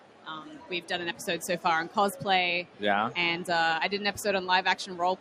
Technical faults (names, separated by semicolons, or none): noise suppressor applied to music or sounds; sound cut by the noise suppressor